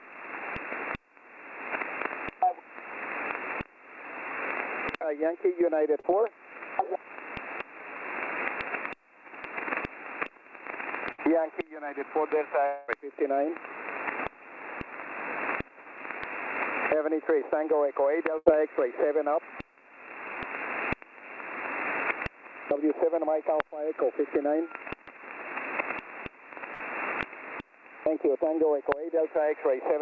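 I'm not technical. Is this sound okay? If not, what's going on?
No, there are a few hiccups where bits of the sound went missing on the way through the call connection.

Around 6.00 to 6.06 s there's a short concealed packet loss. About 40 ms never arrived in time, so the receiving end papered over it by stretching out the sound just before, giving a tiny smear or wobble.

At 11.12 to 11.20 s, 18.38 to 18.48 s and 26.74 to 26.82 s you'll hear a burst of packet loss each time. Roughly 60 to 80 ms dropped out in one go, so the last sound gets held as a brief fading buzz or hiss, then things pick up a little further on with that slice gone.

From 12.66 to 12.90 s there's a longer gap, about a quarter of a second, which is likely a long network dropout. The filler sound carries on as a fading buzz or hiss across the whole gap, with no dead silence. When the sound comes back, that chunk is simply missing.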